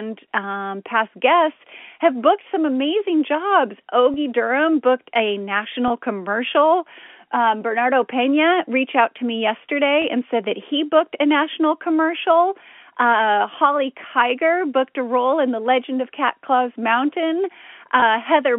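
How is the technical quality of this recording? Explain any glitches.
The line carries four brief glitches from packet loss with pitch repetition. They occur at 4.14 s, just after "booked some amazing jobs", at 5.88 s, after "booked a", at 10.02 s, just before "and said that he", and at 18.00 s. Each gap lasts about 20 ms, which fits a single lost packet. The receiver fills each hole by repeating the last pitch period. So each glitch sounds like a tiny held, slightly buzzy smear rather than a dropout. The G.711 telephone coding band limits everything to about 200 Hz to 3.4 kHz.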